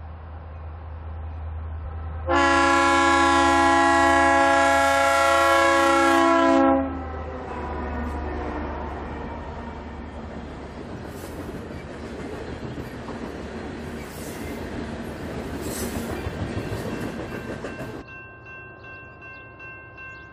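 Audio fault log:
1.85–1.87 s, 7.47 s, 10.81 s, 14.76 s, 18.01 s: damaged data in a compressed stream. Five quick blips, each about 20 ms or less. Bad bytes in the stream throw the decoder off, so it garbles those frames and has to hunt for the next frame header to lock back on.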